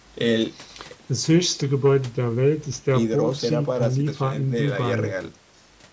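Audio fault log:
No faults found in the speech; the call microphone processing is working normally, with nothing above 8 kHz and the lowest bass trimmed as expected.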